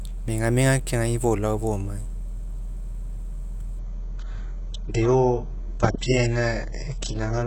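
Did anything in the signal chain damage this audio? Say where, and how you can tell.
Yes. This is an adaptive stream at a lower bitrate, a fault at the network and codec stage. At 3.79 s the speech suddenly loses everything above 8 kHz and turns thin, and it stays that way to the end. That points to the player switching from a full-band AAC rendition to a very low-bitrate HE-AAC one after the connection slowed. Unlike packet loss, the switch leaves no gap, dropout or repeated fragment, only an abrupt and sustained change in quality.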